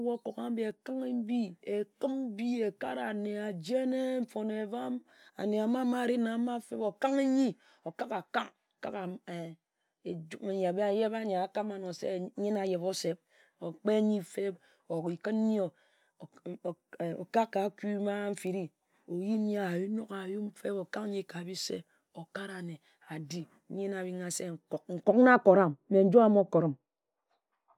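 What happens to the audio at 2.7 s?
Nothing goes wrong at 2.7 s: the speech plays through that moment intact, with no dropout, click, glitch or other audible fault.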